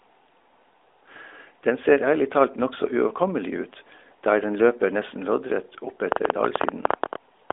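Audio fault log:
6.12–7.51 s train of clicks: about fifteen similar sharp pulses, at roughly 11.6 per second but unevenly spaced, jump well above the narrowband speech. Their shared shape and steady density distinguish them from random crackle. The likely cause is nearby electrical interference or a struggling interface.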